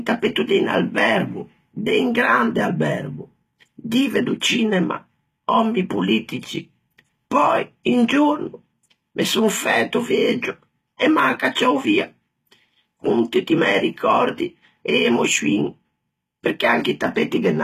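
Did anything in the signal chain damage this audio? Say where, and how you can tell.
Yes. HE-AAC compression affects the whole clip at the codec stage. S sounds are gritty and metallic, and nothing is present above 14.9 kHz. The treble is likely rebuilt by spectral band replication, copying lower bands upward, which fits a bitrate around 20 kbps.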